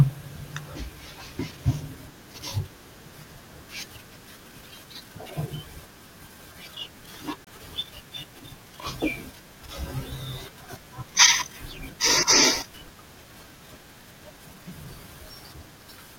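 A speech recording with one Bluetooth stall: at 7.45 s the audio drops to silence for 24 ms and resumes at 7.47 s. The gap is a clean cut rather than a fade, with playback carrying on after the break. The likely cause is radio interference delaying packets on the wireless link, so the headphones' playback buffer emptied and output paused until the retransmitted audio arrived to refill it.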